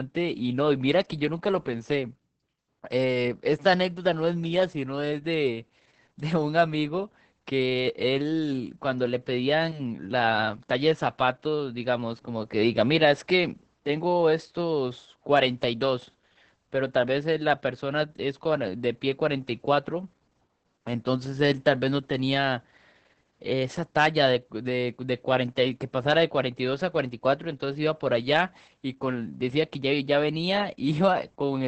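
Heavy Opus voice compression runs through the whole clip. The encoder is working in its SILK linear-prediction mode at a very low rate, which fits about 10 kbps, so it keeps only a wideband signal that stops at 8 kHz and codes the excitation coarsely. The speech comes out dull and muffled, with a hoarse, grainy edge and a faintly robotic quality to the voicing from start to finish.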